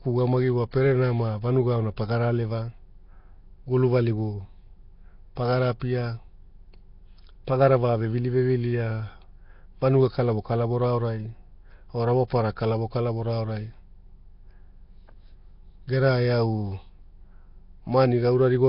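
Speech runs the whole clip through heavy damage that most likely comes from Nellymoser compression, the Flash-era microphone codec. Nothing remains above 5.3 kHz, and the voice carries a rough, hissy halo with a smeared, underwater character. The damage fits a rate near 22 kbps. Weak bands are given no bits and refilled with noise, so the grit sounds like broadband hiss rather than the metallic, warbling artefacts typical of low-rate MP3.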